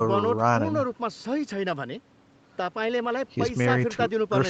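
Nothing technically wrong turns up in this speech recording: it has simply been through ordinary call processing, which is why nothing reaches above about 8 kHz, consistent with a normal wideband Opus call.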